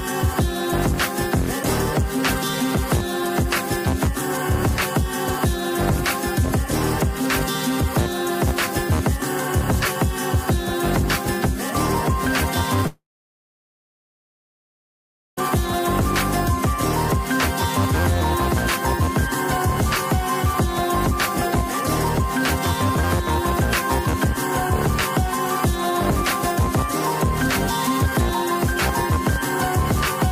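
A long network dropout, most likely a stall in the stream that stopped packets arriving, breaks the audio from 12.87 s to 15.39 s. Roughly 2.5 s of sound never reaches the listener. The receiver briefly extends the last sound as a fading buzz or hiss, which dies out after little more than a tenth of a second, leaving about 2.36 s of silence. The audio then resumes further on, with the lost stretch simply gone.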